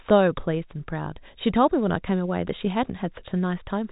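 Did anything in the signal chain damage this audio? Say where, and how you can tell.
No, nothing in the chain damaged this speech. It has passed through G.711 telephone coding, which caps the band at about 3.8 kHz and leaves at most a faint level-following noise under the signal.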